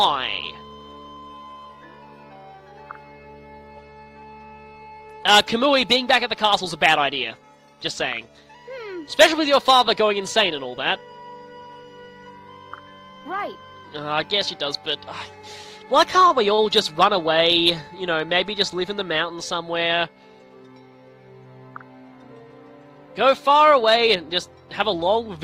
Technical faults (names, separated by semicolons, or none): short stall from a late packet